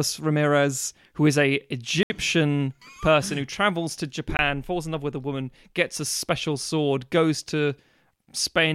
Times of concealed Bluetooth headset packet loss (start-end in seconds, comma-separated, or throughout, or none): none